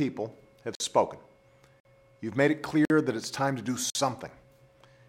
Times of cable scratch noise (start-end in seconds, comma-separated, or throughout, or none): none